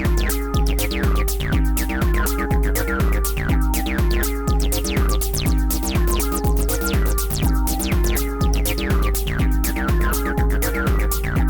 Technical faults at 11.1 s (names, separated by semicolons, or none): adaptive stream at a lower bitrate